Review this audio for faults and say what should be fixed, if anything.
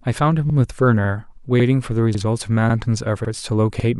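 A short, regular stutter runs through the speech, with a brief doubled fragment at 0.50, 1.05, 1.60, 2.15, 2.70, 3.25 and 3.80 s, each lasting about 50 ms. These are overlapping chunks: the audio was handled in 0.5 s blocks, and each block begins 50 ms before the previous one ended, so that slice plays twice at every join. That pushes the joins 0.55 s apart and gives the even, clock-like repetition.

To prevent it, advance each chunk by its full length, or crossfade and discard the overlap instead of appending it.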